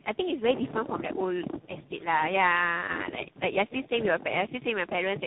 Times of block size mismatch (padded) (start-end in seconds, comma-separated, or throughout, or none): none